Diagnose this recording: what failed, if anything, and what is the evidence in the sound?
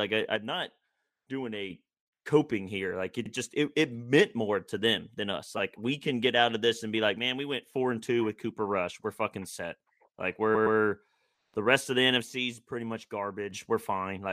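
Three times the level falls by about 6 dB without any change in tone: from 0.36 to 1.70 s, ending just before "coping here", then from 7.19 to 7.74 s, and from 12.22 to 13.51 s. This is one channel dropping out. The likely cause is an intermittent stereo channel upstream of the mono fold-down, such as a connector, cable or interface input. When one of two identical channels goes missing, the sum loses half its amplitude.

Repeated frames cause three stutters in the codec or storage path. At 3.25 to 3.30 s, just before "just it it meant", a short block replays once and adds 52.2 ms. At 5.58 s, just after "to them than us", an 8.7 ms block plays two extra times and adds 17.4 ms. At 10.54 to 10.77 s, a 116.1 ms stretch repeats twice more and adds 232.2 ms. The decoder received the same compressed data more than once and played it again, so the clip is longer by the repeated time.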